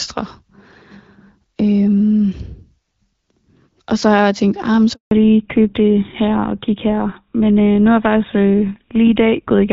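At 4.93 s a handover gap begins: the call was switched between networks and no speech frames arrived during the transfer. The sound cuts off within a few tens of milliseconds and stays silent for 180 ms, until 5.11 s, and that stretch of speech is lost.

From 5.11 s to the end there is a fallback to narrowband. The clear HD Voice sound, which points to AMR-WB at around 12.65 kbit/s, gives way to a codec consistent with GSM full rate. Nothing above 4 kHz remains, so the speech turns dull, boxy and rougher.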